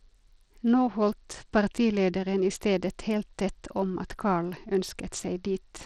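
From start to finish the speech carries plainly audible damage, most likely Bluetooth SBC compression at a starved bit pool, which fits a bitrate near 80 kbps. The fixed sub-bands leave the top range with too few bits, so the treble dulls and flickers while a gritty, aliased roughness rides on the voice. A spectrogram would show the upper bands breaking into patchy, blocky holes, with smeared energy in place of clean harmonics.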